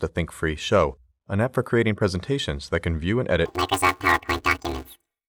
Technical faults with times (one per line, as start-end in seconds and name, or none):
3.45-5.28 planar audio read as interleaved